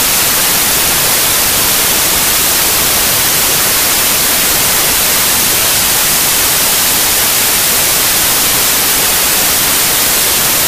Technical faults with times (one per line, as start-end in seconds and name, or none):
0.00-10.68 wrong sample width